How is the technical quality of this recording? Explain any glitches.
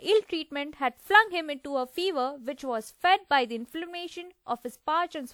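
The speech carries generation loss from start to finish, with a swirly, watery texture, a hollow body, and consonant attacks that smear instead of landing crisply. The likely cause is the audio going through a lossy codec several times over, around four passes in a chain that points to WMA at roughly 96 kbit/s. Each re-encode quantises on a shifted frame grid, so the noise and spectral gaps stack up. The top end still reaches about 20.1 kHz, so it isn't dull, just smeared.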